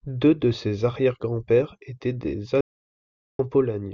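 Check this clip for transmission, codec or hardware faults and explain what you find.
One fault is audible, an audio dropout to silence from 2.61 s to 3.39 s. The speech cuts off abruptly into silence, with no room tone, for about 0.78 s before resuming mid-flow. The input signal was likely lost briefly while recording continued writing silence.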